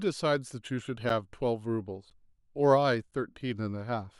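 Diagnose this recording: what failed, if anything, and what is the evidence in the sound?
Playback failed where stream segments join, leaving a gap between stream segments. Hard-edged silent holes of 9 to 10 ms sit at 1.09, 2.10 and 3.11 s, once per 1.0 s segment. Their time stamps leave a small gap. The player fills it with silence.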